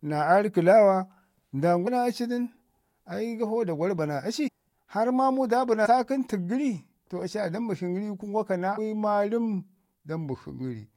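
At 1.86 s, 4.47–4.49 s, 5.85–5.87 s and 8.77 s the speech lurches forward as compressed frames are skipped. Whole coded frames never reach the output, so roughly 200 ms goes missing at the first two points and about 150 ms at the last two, which points to runs of several frames each. Unlike a dropout, there is no silent gap, and the speech jumps straight ahead at each join.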